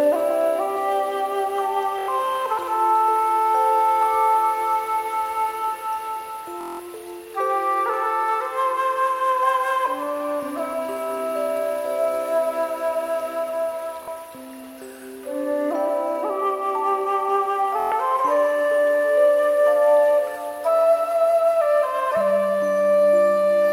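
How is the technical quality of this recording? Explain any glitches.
The recording has four short Bluetooth stutter glitches, at 1.99 s, 6.61 s, 14.03 s and 17.80 s. Each is a brief buzzing repeat, lasting about 93, 186, 46 and 116 ms. Audio packets arrived late or not at all, so the receiver looped its last short buffer until fresh data came, and the sound then jumps ahead.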